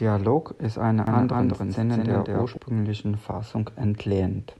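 A speech recording with a doubled audio track between 1.07 and 2.57 s. For that stretch a second full-band copy of the speech runs around a fifth of a second behind the first, at roughly the same level, with no decay or room colouring to suggest a natural echo. The copy cuts in and out abruptly at both ends. The likely cause is the same signal reaching the mix twice, once through a slower path.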